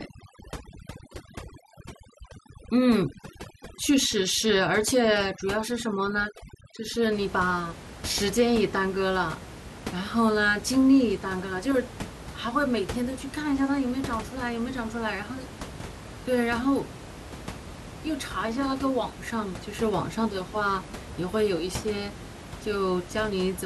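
From the start to about 7.12 s, the pauses drop to near silence flecked with twinkling specks. That is overdone noise removal. The reduction was pushed so hard that any frequency band sitting close to its noise estimate was pulled far down or shut off, taking the quieter parts of the speech with it. The room noise, about 14 dB below the speech, is what the processing was chasing.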